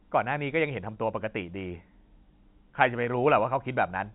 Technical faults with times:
none

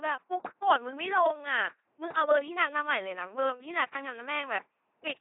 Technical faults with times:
0.00-5.21 LPC-10 vocoder

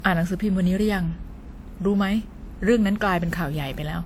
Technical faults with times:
0.00-4.05 generation loss

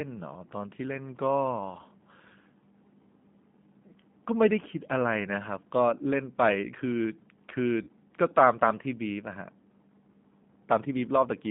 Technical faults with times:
0.00-11.50 G.729 codec
7.83-7.88 VoIP packet loss concealed by the speech codec

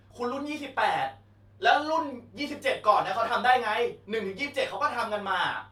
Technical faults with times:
none

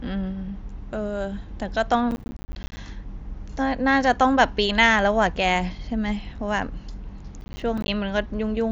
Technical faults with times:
2.11-2.77 processor overload crackle
7.41-7.88 processor overload crackle

